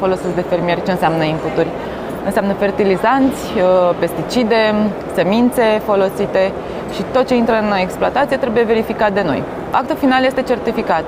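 Nothing stood out as a technical problem on listening.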